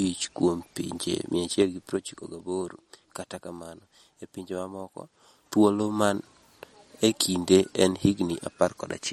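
Throughout the clip, the speech has a plainly audible watery, swirling quality and nothing above 18.5 kHz, likely from MP3 compression at a low bitrate that fits roughly 48 kbps. Weak frequency lines drop in and out between frames, and the top band is cut off.

Zipper noise runs from 1.45 to 2.65 s, just after "kuom pinje", and from 4.95 to 6.14 s, just after "kamano e pinje". The level moves in unsmoothed 3 dB steps, about three per second. It falls by roughly 10 dB in the first stretch and rises by about as much in the second, and each step adds a small click that ticks along under the speech.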